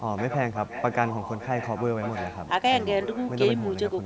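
Echo leak at 0.16 to 1.85 s, 2.01 to 2.49 s and 3.03 to 3.32 s: a faint copy of the speech returns about 1.18 s late, loudest in the middle stretch, likely from a loudspeaker echo canceller letting some of the far-end playback back into the call.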